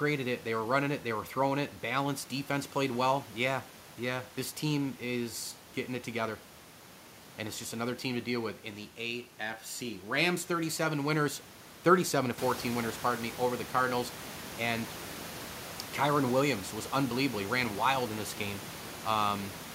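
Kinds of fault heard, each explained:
No technical fault can be heard in the speech. The room's background noise grows by about 11 dB at around 12.5 s but stays about 14 dB below the speech after that, and it belongs to the recording itself rather than to the system.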